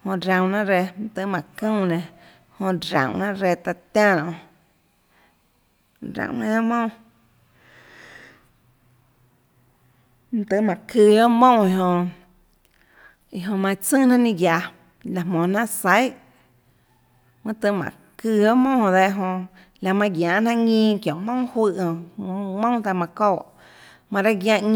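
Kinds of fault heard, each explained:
No faults can be heard in this recording.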